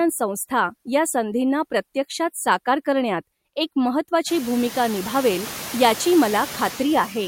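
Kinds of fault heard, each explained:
Noise suppressor artifacts: present throughout the clip. The suppressor judges, frame by frame, which frequency bands hold steady noise and pulls them down by about 13 dB, so the background sinks in the gaps between words and comes back up underneath them as the gain opens for speech. The pumping is plainest after around four and a half seconds, where the room noise rises by about 24 dB, ending about 15 dB below the speech.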